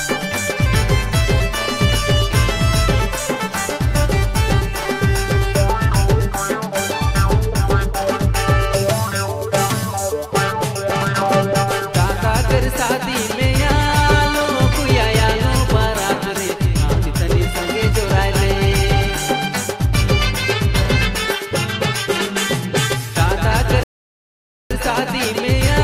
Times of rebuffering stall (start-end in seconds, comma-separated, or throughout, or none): 23.83-24.71